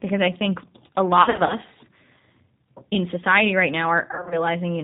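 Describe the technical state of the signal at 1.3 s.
At 1.3 s the call is inside a stretch of VoIP packet loss concealed by the speech codec, running from 1.22 to 1.55 s, just after "because I think a". Packets went missing, about 140 ms of audio scattered across 280 ms in gaps of up to 40 ms, and the decoder filled each hole by repeating its last pitch and vocal tract settings at falling gain. The sound turns buzzy and thin, fades, and stays weak for a moment after the packets resume.

Underneath, the whole signal passes through the G.729 codec at 8 kbit/s. It rebuilds the speech from a filter, a pitch predictor and a few pulses per frame, and it discards everything above 4 kHz. The result is a plainly rough, synthetic, band-limited sound.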